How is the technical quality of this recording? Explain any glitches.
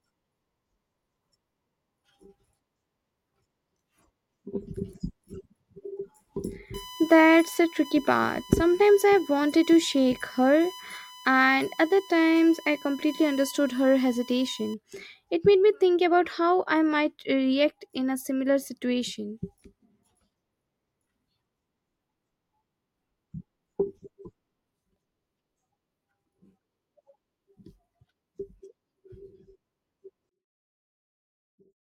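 Two clear glitches, one in the middle and one right at the end.

From 6.74 to 14.74 s there's USB whine: a steady tone built on 1 kHz, loudest at its 3 kHz harmonic. Current drawn in the bus's 1 ms frames is getting into the audio through power or ground, and the whine sits around 20 dB under the speech.

From 30.29 s to the end, the speech drops by about 40 dB. The likely cause is one channel inverted: with one side's polarity flipped, the centred voice cancels when the channels sum to mono. Only a faint residue is left.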